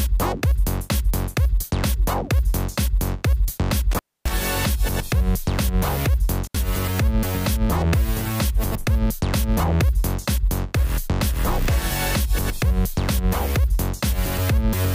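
A loose cable or plug briefly opens twice, an intermittent contact: at 3.91 to 4.31 s the sound drops out for about 266 ms, and at 6.45 to 6.57 s for about 73 ms, with crackle at each edge and faint hiss in the gaps.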